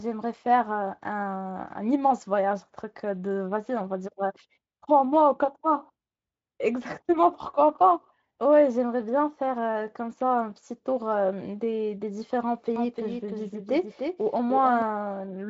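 A doubled audio track runs from 12.76 to 14.82 s of this speech recording: a second full-band copy trails the original by about 300 ms, about 5 dB quieter, with no decay or room colour, and starts and stops abruptly. This likely comes from a slower capture path or an edit leaving two out-of-step copies, heard over audio that stops near 7.7 kHz through Speex.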